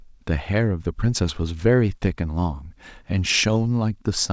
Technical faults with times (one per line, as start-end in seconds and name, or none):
none